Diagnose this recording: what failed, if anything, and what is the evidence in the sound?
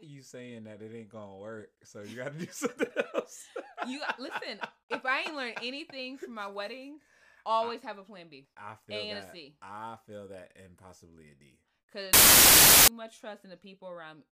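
Samples built from the wrong bytes, at 12.13 to 12.88 s, a sample-format conversion failure: the speech gives way to loud, harsh broadband noise for about 0.75 s. The bytes of each sample were assembled in the wrong order or alignment, so the rapidly changing low bits became the dominant part of every value.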